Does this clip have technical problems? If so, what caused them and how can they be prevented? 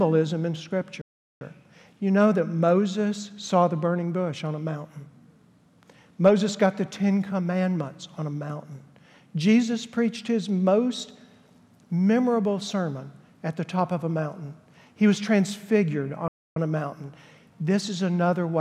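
Yes. Two playback stalls cut the sound to silence, from 1.01 to 1.41 s (about 0.39 s) and from 16.28 to 16.56 s (about 0.28 s). The likely cause is the player's buffer running dry or its thread being blocked. Larger buffering and a higher-priority audio thread prevent this.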